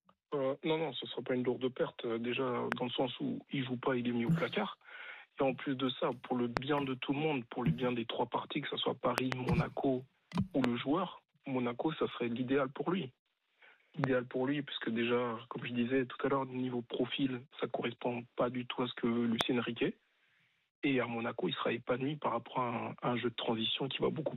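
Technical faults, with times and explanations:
2.72 s, 6.57 s, 9.18–9.34 s, 10.64 s, 14.04 s and 19.41 s: loud pop. A sharp, brief crack jumps out about 20 to 25 dB above the sound, doubled at 9.18–9.34 s, while the audio carries on beneath. This is likely a voltage step or pulse, such as a plug, switch or static discharge, entering the signal path.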